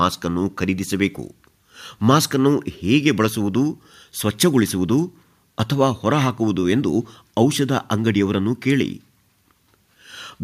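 A speech recording with no technical fault to point to. Nothing in it calls for a time or a cause.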